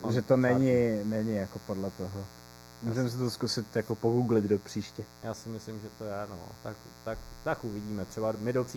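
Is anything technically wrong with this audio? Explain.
Yes, two faults run through the whole speech clip.

Mains buzz sits about 20 dB below the speech. Switching spikes twice in every 60 Hz cycle add a raspy, steady buzz rich in upper harmonics.

Channel delay (comb filtering) makes it hollow and phasey. One channel lags a fraction of a millisecond, and summing to mono notches out around 3 kHz.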